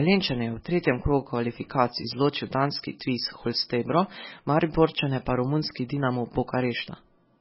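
A speech clip carrying heavy MP3 compression throughout: everything above 5.6 kHz is gone, and the watery, swirly texture suggests a likely very low bitrate, around 16 kbps.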